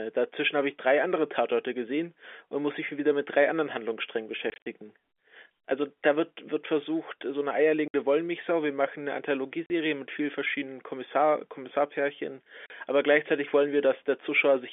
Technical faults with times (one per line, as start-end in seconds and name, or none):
4.50-4.66 packet loss filled with silence
7.88-7.94 packet loss filled with silence
9.66-9.70 packet loss filled with silence
12.66-12.70 packet loss filled with silence